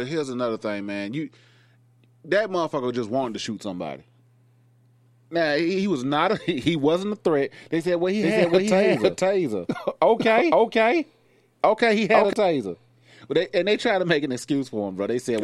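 Doubled audio track, 8.23 to 12.33 s, after "said well he": an equally loud copy trails by half a second, likely a slower capture path.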